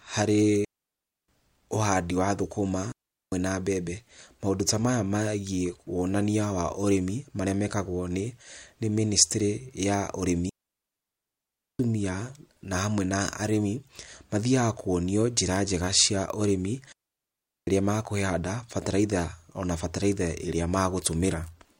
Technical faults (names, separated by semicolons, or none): digital wireless dropout